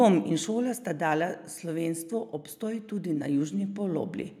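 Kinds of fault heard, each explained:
Automatic gain falling: The automatic gain control judged the incoming speech too loud and pulled its gain down step by step rather than all at once. Here the level drops by about 5 dB between 0.05 and 0.99 s. The voice and the room noise behind it sink together, which shows the change comes from the gain stage and not from the talker.
Automatic gain rising: The automatic gain control decided the input had become too quiet and raised its gain slowly to compensate. In this clip the level climbs by about 7 dB from 2.59 to 4.21 s, a swell lasting well over a second. Speech and background lift as one, so the noise floor grows along with the voice.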